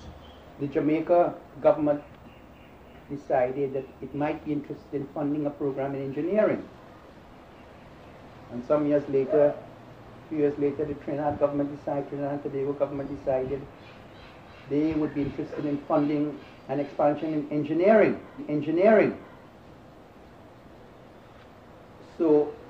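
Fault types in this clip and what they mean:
Stream segment repeated: just under a second of sound, from 18.35 to 19.32 s, plays a second time after a small blip at the jump back, adding about 0.98 s. The player fetched or queued the same stream segment twice.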